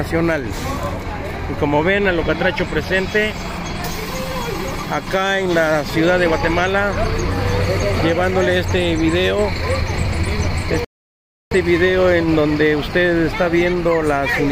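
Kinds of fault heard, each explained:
Rebuffering stall: playback ran out of downloaded audio and paused until more data arrived. At 10.85 s the sound drops to silence for about 0.67 s, then resumes at 11.51 s exactly where it stopped, so nothing is missing but the clip runs longer.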